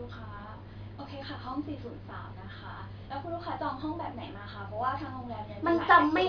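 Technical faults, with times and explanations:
No technical faults can be heard anywhere in this recording.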